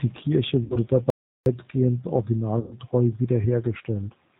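A speech recording carried over the G.729 codec at 8 kbit/s, which models the voice as a filter, a pitch predictor and a handful of pulses per frame and discards everything above 4 kHz, so the whole clip sounds band-limited, slightly rough and synthetic. VoIP packet loss concealed by the speech codec occurs twice: about 60 ms of data went missing at 0.64 to 0.77 s and about 120 ms at 2.59 to 2.76 s, consistent with 30 ms packets. Each time the decoder extended its last pitch and filter with falling gain, turning the voice into a buzzy tone or a coloured noise that fades, and it stays weak briefly afterwards. A playback stall, likely the player running out of data or being blocked, cuts the audio to silence for 0.36 s from 1.10 to 1.46 s before it resumes.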